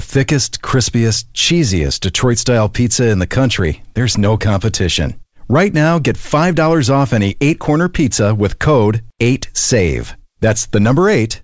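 Nothing's wrong with this speech clip; it simply has the sound of a normal wideband call, with the G.722 codec leaving nothing above 8 kHz.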